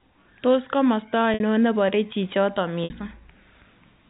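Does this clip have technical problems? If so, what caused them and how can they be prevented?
Yes. At 1.34 s and 2.84 s, 60 ms of speech turns held and buzzy. This is packet loss with pitch repetition: the receiver loops the last pitch period across each gap. Adding forward error correction or redundant packets, and keeping the network path uncongested, would prevent these dropouts.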